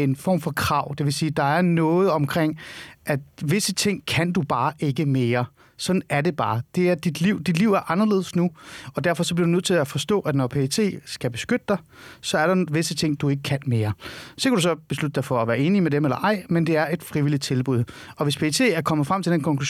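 No technical faults are audible anywhere in the recording.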